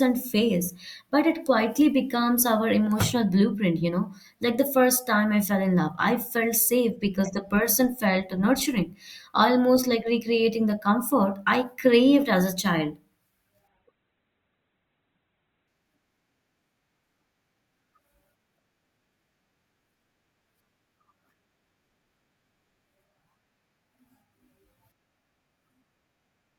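At 13.68 s the adaptive stream drops to a lower bitrate for about 2 s, switching to a cheaper encoding when the connection slows, then switches back at 15.68 s. Nothing above 4.2 kHz survives in that stretch, so the speech turns dull, with extra codec smearing, which fits a fall from roughly 64 to 12 kbit/s Opus. Both changes are abrupt, with no gap in the audio.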